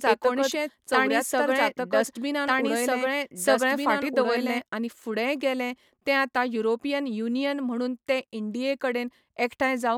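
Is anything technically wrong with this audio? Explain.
Yes. A doubled audio track is already present when the clip begins and runs to 4.62 s, stopping abruptly just after "एकोणशे चौऱ्यातर". A second copy of the speech trails about one and a half seconds behind, at roughly equal loudness. It is clean and full-band, with no room colour, so two overlapping copies compete. This is likely a duplicate capture through a slower path.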